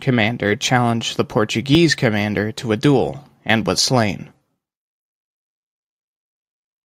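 At 1.75 s the speech jumps forward, skipping about 10 ms, and at 3.78 s there is a larger jump of about 30 ms. Neither leaves any gap of silence. The sound on either side of each cut is butted together directly. This points to a dropped buffer (overrun), which is the likely cause: the capture software failed to read its samples before the hardware overwrote them, so a stretch of audio was lost.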